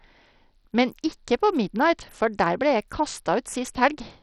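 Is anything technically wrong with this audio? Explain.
Yes. Throughout, the speech sounds gritty, with treble flickering in and out and a rough aliased edge, likely Bluetooth SBC compression heavily starving upper sub-bands, consistent with a bitrate near 64 kbps.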